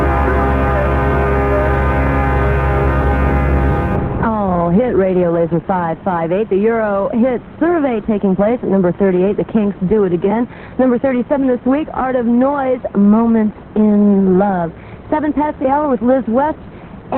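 From 3.96 s to the end the audio abruptly dulls with no gap, an adaptive stream dropping to a lower bitrate, consistent with a low-rate Opus layer; a spectrogram shows content cut off sharply above 4.3 kHz.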